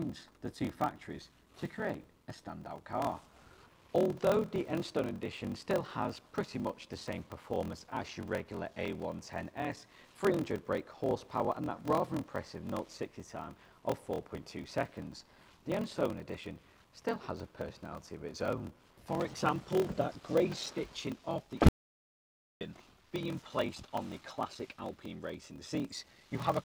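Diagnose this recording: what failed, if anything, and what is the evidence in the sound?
A block size mismatch (padded) runs through the whole clip, at the driver or buffer stage. A steady buzz sits under the sound at 41.7 Hz. The audio also plays slow, at 0.889 times normal speed, yet the pitch stays about right. That pattern fits 1024-sample writes into reads of about 1152 samples. The shortfall in each block is filled with zeros. Those short gaps repeat at the block rate, which makes the buzz. They also stretch the timing.

There is an audio dropout to silence from 21.69 s to 22.61 s. About 0.92 s of audio is gone. The sound cuts off abruptly and returns just as abruptly. The gap is dead digital silence, with no room tone at all. Whatever occurred in that stretch cannot be recovered. The likely cause is lost input upstream of the recorder, such as a disconnected device or a stray mute. 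The recorder kept writing zeros until the signal came back.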